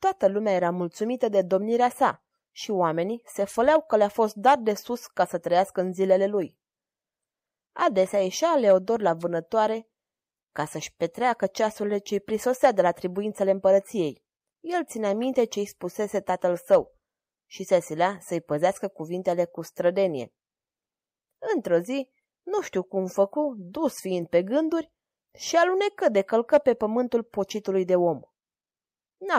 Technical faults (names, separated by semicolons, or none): none